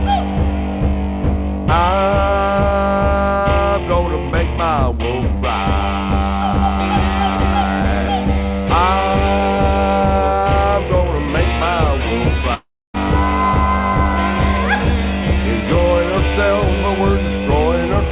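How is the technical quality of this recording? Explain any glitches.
One clear glitch stands out, on top of the G.711 A-law call codec's band limit, which leaves nothing above 4 kHz. From 12.54 to 12.96 s there is a long network dropout, the likely cause: 0.4 s of audio never arrived. The receiver stretched the last sound into a fading buzz, then left about 0.28 s of silence before the audio resumed with that stretch missing. A waveform shows a decaying tail into a flat gap. A spectrogram shows smeared, fading bands, then an empty column.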